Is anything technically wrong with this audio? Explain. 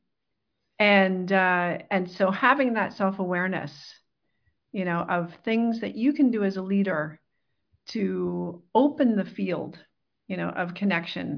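No, nothing technically wrong can be heard in this speech recording. No fault stands out at any point in the clip.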